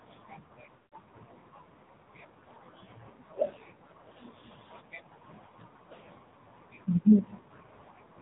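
This is speech that has passed through the AMR narrowband mobile codec. Everything above 4 kHz is gone, so a spectrogram shows a hard ceiling there, and the voice is buzzy and synthetic, with heavy coding damage that fits a low AMR-NB bitrate of around 5.9 kbps. Lost AMR speech frames hit from 0.76 to 0.95 s. The decoder kept repeating its last pitch and vocal-tract settings at falling gain, so the sound smears and fades out over roughly 160 ms, which fits about eight dropped frames. On the waveform this shows as a tapering envelope, and the spectrogram shows frozen, blurred harmonics.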